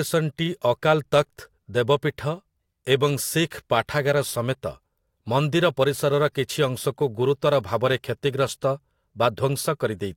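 From 4.25 s to 8.19 s the speech carries sample clock jitter. The converter's timing wanders by a few microseconds, so each sample lands slightly off its proper instant. Where the speech waveform changes fastest, that timing slip becomes a level error. The result is a fine hiss and graininess riding on the speech, strongest on loud and bright sounds. It sits roughly 35 dB below the signal and drops away in pauses.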